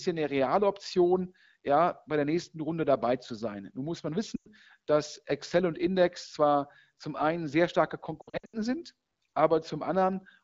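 Lost AMR speech frames at 4.35 to 4.52 s and again at 8.22 to 8.57 s. Radio errors corrupted frames, so the wideband decoder repeated its last good pitch and vocal tract settings at falling gain. The first gap, about 100 ms, sounds like five 20 ms frames missing, and the sound sinks toward near silence. The second loses about 240 ms in bursts across 320 ms, the longest run 80 ms, giving stuttering dropouts. Each time the voice returns briefly weak or rough over otherwise clear HD Voice.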